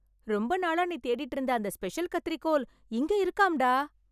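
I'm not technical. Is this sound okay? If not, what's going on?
Yes, this speech recording sounds fine. Nothing in it stands out as a technical problem.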